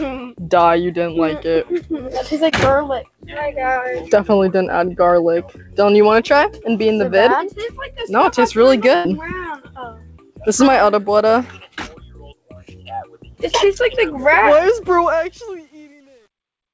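At 2.50 s there is a short concealed packet loss. About 20 ms of the call stream arrived too late for the decoder, and the receiver bridged the hole by extrapolating the preceding sound before crossfading back. It is heard as a brief smear lasting roughly 30 ms.

From 8.95 to 9.07 s a burst of packet loss removes about 100 ms. Concealment sustains the last sound while attenuating it, producing a held, decaying buzz or hiss. Playback then resumes later in the signal, so the material in that gap is gone.

The smooth fade-out beginning around 15 s carries truncation distortion from 15.00 s to the end. The fade was requantised without dither at a resolution that fits roughly 9 bits. From 15.44 s onward the waveform collapses into coarse steps, and the tail turns gritty.

Across the clip, the call codec's band limit means nothing is present above 8 kHz.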